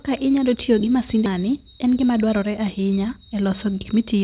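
At 1.26 to 1.28 s, right after "inyalo tiyo gi", the speech jumps forward with no gap, and roughly 0.4 s is simply gone. This skip ahead happened because a stretch of audio was dropped, on the way or by the jitter buffer, when newer packets were already waiting, joining both sides almost directly.

From 1.38 to 3.35 s the speech sounds hurried, running about 110 % of normal speed while the pitch stays put. This jitter buffer speed-up came from the receiver cutting many short pitch-period pieces, about a fifth of a second in all, to shrink excess buffered delay. The speech stays band-limited below 4 kHz throughout, as expected from the G.711 call path.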